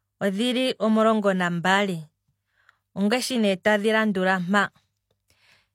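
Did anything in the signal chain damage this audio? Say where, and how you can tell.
Yes, the damage comes from the codec. At 3.63 s a short burst of hiss, about 19 ms long, arrives just ahead of a sharp attack in the speech, and the attack itself sounds softened and smeared. This is pre-echo. The transform codec spreads its quantisation noise across the whole block, so noise sized for the loud onset also fills the quiet moment before it. Because the smear comes before the attack, it can't be a reverb tail or a click.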